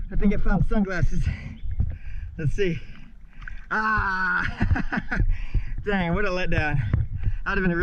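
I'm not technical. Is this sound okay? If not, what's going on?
Yes, nothing stood out as wrong when listening to this sound.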